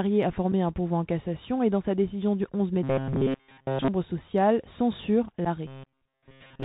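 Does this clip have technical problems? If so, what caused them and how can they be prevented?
Yes. Bluetooth CVSD headset codec, present throughout: the sound is squeezed into a narrow telephone band, with nothing above 4 kHz. The codec sends a single up-or-down bit per sample and adapts its step size, so fast, loud high-frequency detail outruns it. S sounds turn scratchy and a grainy hiss sits underneath, which fits a 64 kbps CVSD headset link. Prevent it by using a wideband (mSBC or LC3) headset profile or a wired microphone.

Unconcealed Bluetooth headset packet loss, at 0.52 s and from 5.45 to 5.47 s: each time, about 7.5 ms of audio drops out into a hard-edged hole. Each gap points to a single lost radio packet between headset and phone, with nothing generated to cover it. The audio resumes abruptly, briefly quieter as the codec's step size recovers. Prevent it by keeping the headset close to the phone, away from Wi-Fi and other 2.4 GHz interference.

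Robotic sound from repeated short buffers, from 2.83 to 3.88 s and from 5.67 s to the end: the sound becomes a rigid metallic buzz at 134 Hz that only loosely tracks the speech. The first stretch is entirely repeated material, and most of the final stretch is too. The likely cause is audio arriving too slowly, so the software loops the last short block, about 7.5 ms, instead of playing fresh audio. Prevent it with larger playback buffers and less CPU load on the device.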